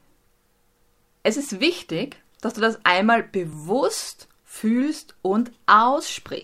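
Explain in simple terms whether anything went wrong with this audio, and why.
Yes, something went wrong. Between about 0.48 and 5.56 seconds, the speech is interrupted by a small tick roughly once every 1.01 seconds, about seven in all, as steady as a clock. This is periodic USB or driver dropouts: something on the computer briefly stalls the connection to the audio device at a fixed interval, and each time around a hundredth of a second of sound is skipped entirely, leaving a tiny jump that you hear as a click.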